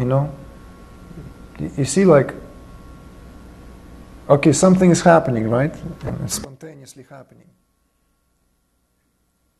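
At 6.06 to 6.10 s there is a short glitch, about 30 ms long. This is damaged data in a compressed stream: data in that stretch was corrupted or lost, so the decoder misread the affected frames, lost its place, and searched for the next frame header it could recognise. The garbled output makes that brief glitch.

From 6.45 s to the end, the sound abruptly drops by about 25 dB. What remains is a faint residue, with the solid centre largely gone. The likely cause is one channel inverted: one stereo channel has had its polarity flipped, so when the two are summed to mono, everything common to both cancels. Only the small differences between left and right survive, which leaves that weak remnant.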